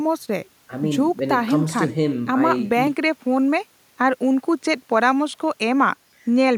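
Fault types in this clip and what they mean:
Input switched to a poorer device: At 2.87 s the speech abruptly loses its top end and stays that way to the end, most likely because recording moved to a lesser microphone or headset path. On a spectrogram, the high-frequency energy vanishes along a hard horizontal edge, with a faint new noise floor far beneath the speech. The waveform shows no gap at the switch and roughly unchanged level, so the duller tone is the main audible clue.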